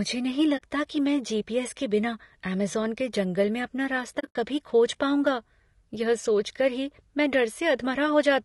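Low-delay AAC compression runs through the whole recording. The speech sounds rough and grainy, with noise between the harmonics and a thin, artificial top band. This is likely AAC-ELD, whose short frames resolve pitch poorly, and the damage fits a bitrate near 32 kbps.

AAC frame loss with muting leaves a 40 ms hole at 0.57 to 0.62 s, before "कि मैं". A second cluster spans 4.19 to 4.36 s, between "के जंगल में अपना" and "कभी खोज पाऊँगा यह", with the longest gap about 70 ms. The decoder zeroed the missing frames, so the sound fades out and back in.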